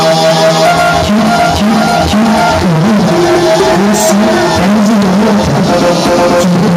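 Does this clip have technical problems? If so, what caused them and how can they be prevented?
No technical faults are audible.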